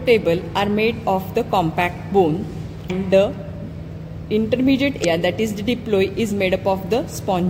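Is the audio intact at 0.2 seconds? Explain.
Yes, at 0.2 seconds the audio plays through cleanly, with no dropout, click, distortion or other fault at that moment.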